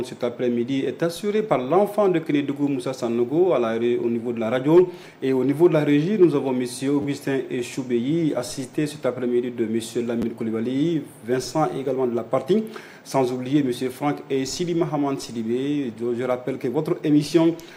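At 7.02 to 7.05 s and again at 10.22 to 10.24 s there's a repeated buffer: fresh audio ran late, so one tiny slice got replayed three times, then twice. The slice length fits a 10 ms buffer, so each one comes across as a quick click-buzz, and nothing seems dropped.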